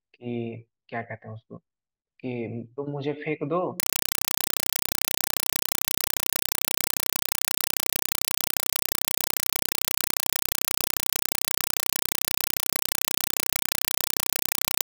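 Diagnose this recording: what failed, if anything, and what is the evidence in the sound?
Compressed stream played as audio, from 3.80 s to the end, at the playback stage: an undecoded AC-3 bitstream was passed through as if it were samples. The speech gives way to loud chattering static, 4 ms noise bursts repeating 31.25 times a second, separated by zero padding.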